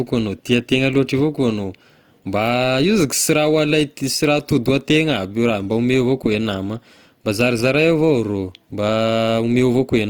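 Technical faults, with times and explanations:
Throughout, Opus compression: the speech carries plainly audible codec damage, with a rough, grainy, noisy texture on the voiced sounds and little of the hollow swirl MP3 would leave, which points to Opus in its music (CELT) mode, likely at a rate near 24 kbps. Short of bits, the encoder keeps each band's energy but refills the detail with folded or noise content. Bandwidth stays full, reaching about 20.1 kHz.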